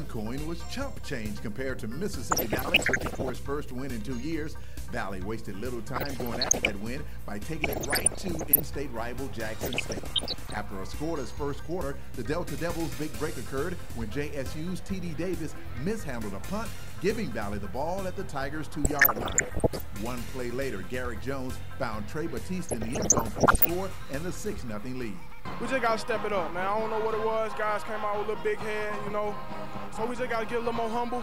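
DAB burbling appears in six bursts of about a second each: 2.31–3.30, 5.96–6.82, 7.64–8.62, 9.61–10.61, 18.84–19.81 and 22.69–23.70 s. Bit errors of around 0.7 to 1 percent escape correction, corrupting MP2 sub-band data into short noise blips and brief sub-band level jumps.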